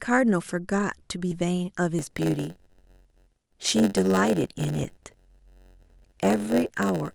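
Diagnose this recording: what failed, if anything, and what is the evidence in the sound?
Codec or storage stage dropped whole compressed frames of 10 ms: short jumps at 1.31 s, 3.65 to 3.68 s and 4.83 s, each skipping one or two frames of speech.

A buffer stage hit a block size mismatch (padded): short blocks were zero-filled, giving a 91.9 Hz buzz from 1.98 s onward, with speech slowed to 0.919x.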